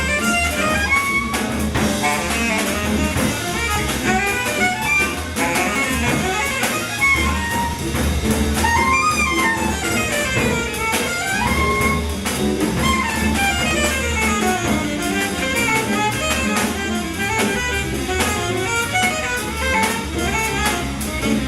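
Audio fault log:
1.77 to 15.70 s, overlap between stream segments: brief clicks or tiny skips at 1.77, 3.76, 5.76, 7.74, 9.73, 11.72, 13.71 and 15.70 s, recurring about every 2 s, which fits 2-second segments. Each boundary's time stamps overlap, so the player discards that stretch even though the audio was never actually duplicated. Between 5 and 16 ms of real sound disappears each time, and the waveform jumps discontinuously.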